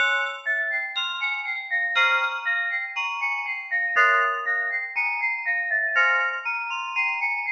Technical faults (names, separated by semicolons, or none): sound cut by the noise suppressor